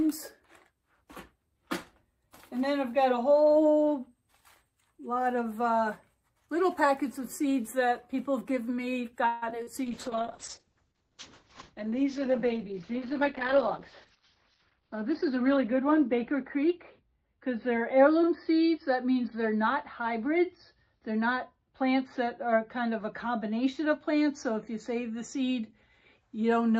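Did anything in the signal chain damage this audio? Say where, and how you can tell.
Yes. The damage happened in the call path, across the network, the codec and the receiver's buffer.

Call audio freeze, 9.27 to 9.44 s. For about 145 ms the last sound is stretched into a fading buzz or hiss, and then the audio picks up exactly where it left off with nothing skipped. That pattern means time was inserted, not lost. The likely cause is packets delayed in transit, so the jitter buffer ran empty and the receiver had to improvise until they arrived.

Short concealed packet loss at 9.50 to 9.53 s and again at 9.63 to 9.69 s. Each is a brief smear or wobble lasting a few hundredths of a second. About 40 ms of real audio is gone each time, filled by the decoder extending the preceding sound and then crossfading back. The first fill lasts only about 15 ms because the receiver was also shedding the extra delay left by the freeze.

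Call bitrate drop from 9.85 s to the end. The encoder rate falls from 48 kbps to 8 kbps and stays at its lowest for about 4.8 s. The tone turns rough and watery, and the top end is cut: the bandwidth narrows from 20 kHz to 6 kHz, so everything sounds muffled. This is the codec obeying a collapsed bandwidth estimate on the network side.

Jitter buffer speed-up, 13.21 to 13.58 s at 110% and 14.58 to 16.14 s at 106%. The audio hurries while the pitch stays the same. The receiver is cutting out pitch-period-sized slices to drain a buffer that had overfilled, removing roughly 50 ms in the first stretch and about a tenth of a second in the second.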